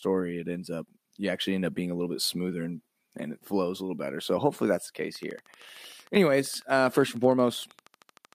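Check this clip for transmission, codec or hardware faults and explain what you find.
One fault is present in the speech: a train of clicks from 5.16 s to 8.34 s, starting just after "hopefully that's the case". Similar pulses arrive at a steady 12.9 per second, around forty in all, each roughly as loud as the speech itself, ticking over the talking and through the pauses. The likely source is interference from nearby equipment or a faulty connection or power supply.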